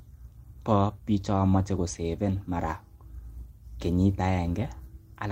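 Nothing faulty can be heard anywhere in this speech recording. There is no moment in it that needs a timestamp or an explanation.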